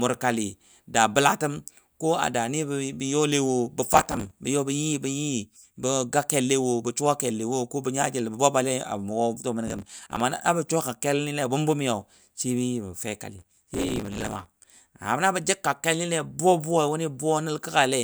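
Around 3.92 to 4.31 s, then 9.68 to 10.20 s, and again for longer from 13.39 to 14.67 s, the speech picks up processor overload crackle. The machine is missing buffer deadlines back to back, and each miss replays a scrap of old audio with hard edges, so you get a gritty tearing riding on the voice. The grain suggests buffers of around 5 ms, with dozens missed in the first two bursts and far more in the last.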